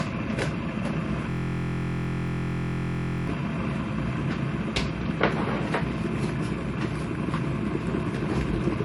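Everyday sound with nothing above 11.3 kHz and the artefacts of a first MP3 encoding throughout. This is likely low-bitrate audio saved at a high bitrate: a clean high-bitrate encode would not cut off this low. From 1.3 to 3.27 s a system hang loop repeats one 23.22 ms slice exactly, fitting a 1024-sample buffer. It makes a steady 43.1 Hz buzz, unlike dropout gaps, and about two seconds of audio are lost.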